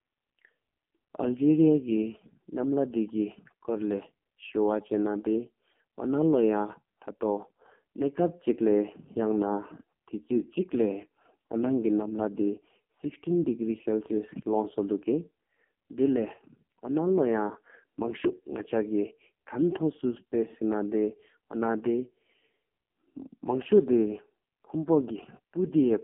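Throughout, AMR narrowband mobile codec coding leaves buzzy, synthetic speech, fitting a 5.15 kbps mode. A spectrogram shows energy only between 150 Hz and 3.4 kHz.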